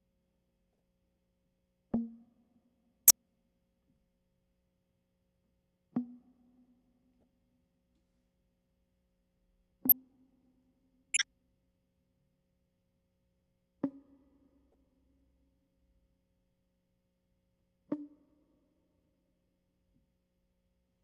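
Corrupt frames decoded in this music at 0.73, 1.94, 3.07, 7.21, 9.89, 11.14 and 14.72 s: damaged compressed frames played anyway, giving brief chirps or noise bursts, loudest at 3.07 and 9.89 s and barely audible at 0.73 s.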